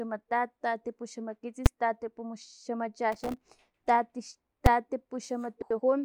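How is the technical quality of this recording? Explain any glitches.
The recording has three kinds of technical fault: two sharp bangs, a burst of crackle, and a short scrambled passage near the end.

At 1.66 s and again at 4.66 s there are invalid numbers at full scale. A calculation produced infinite or invalid values, and the output was forced to its maximum level for one block of about 5 ms, which fits a 256-sample block. Because the block is so short, each event is heard as a single loud bang that cuts through the speech.

From 3.12 to 3.42 s there is processor overload crackle. The processor fell behind and missed dozens of deadlines for very small buffers of roughly 1.5 ms. Each missed buffer left a tiny hard-edged gap of silence. Packed this closely together, the gaps make a gritty, tearing crackle over the speech for about 0.3 s, and it stops once the load eases.

From 5.62 to 5.80 s there are frames out of order. 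Two neighbouring runs of audio, each about 85 ms long and consistent with four frames apiece, were decoded in swapped order. The stretch plays with its halves exchanged, so the speech turns into a garbled flutter. No time is lost overall.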